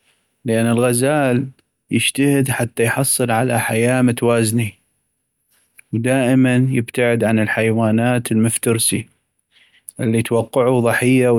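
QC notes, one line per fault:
No faults heard in playback.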